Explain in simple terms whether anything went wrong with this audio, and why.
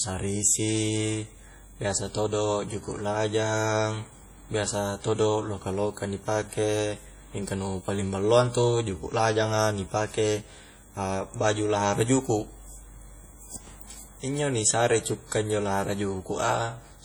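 The speech was likely squeezed hard by WMA compression, which discards detail, so it sounds ringing and washy throughout, with hiss that swells along with the talking.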